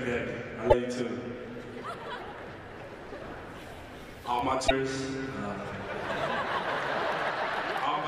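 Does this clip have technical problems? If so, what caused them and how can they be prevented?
Yes, there are two short bursts of damaged data in the compressed stream, one from 0.67 to 0.74 s and another from 4.64 to 4.71 s, each lasting about 70 ms. At both points a stretch of the encoded data was wrong, so the decoder couldn't read those frames properly, lost sync, and had to hunt for the next valid frame header before playback settled. That comes through as a brief glitchy blip. To prevent it, use error-checked transfers and storage, and verify checksums before decoding.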